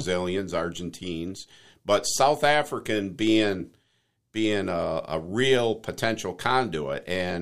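No technical faults can be heard anywhere in this speech recording.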